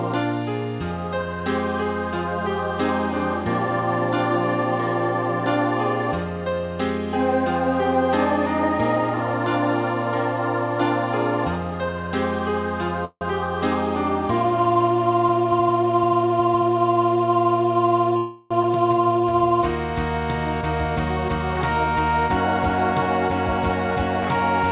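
At 13.05 to 13.23 s the sound stops moving forward and the last instant is drawn out as a fading buzz for 161 ms, the final 50 ms of it dropping to silence, before the audio picks up exactly where it left off. This is a call audio freeze, likely caused by packets stalling in transit so the jitter buffer emptied and the receiver had to stretch what it last had. Nothing is lost, but the clip is now 161 ms later than before. A longer freeze follows at 18.17 to 18.53 s: 336 ms of continued, decaying buzz with no silent stretch, again resuming without anything missing and pushing the delay up by 336 ms.

Just after, at 18.63 s, the sound jumps forward: a skip ahead, where roughly a fifth of a second of audio is dropped and the two sides are joined with only a few milliseconds between them. That stretch was lost on the way or discarded by an overflowing buffer while later audio was already waiting.

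From 19.02 to 19.44 s the audio runs slower at an unchanged pitch, about 88% speed, with sounds drawn out. This is a jitter buffer slow-down: the receiver repeated single pitch periods over and over, adding 58 ms to rebuild its reserve. Throughout, the call path passes nothing above 4 kHz, which fits G.711 mu-law coding.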